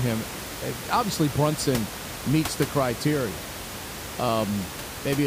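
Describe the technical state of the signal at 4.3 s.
At 4.3 s the speech signal is intact, with only the room noise sitting about 10 dB below it.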